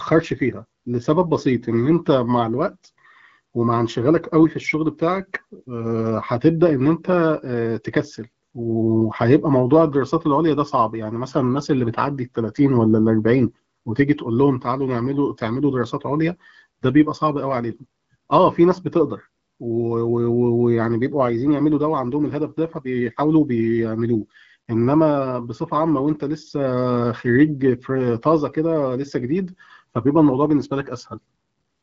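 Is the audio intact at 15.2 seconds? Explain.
Yes, at 15.2 seconds the speech is intact, carried cleanly through the AMR wideband (HD Voice) codec path with no fault to be heard at that moment.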